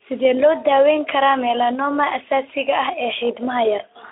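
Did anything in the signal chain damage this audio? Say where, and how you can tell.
No, no stage in the chain damaged this speech.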